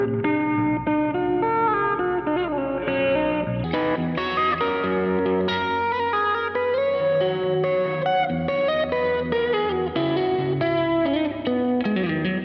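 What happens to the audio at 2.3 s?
A wrong sample rate is at play from 0 to 3.64 s: the samples run out slower than they were captured, which fits 22 kHz material played at 16 kHz. Speed falls to 0.726 times and pitch drops about 5.55 semitones, so the sound drags low and slow.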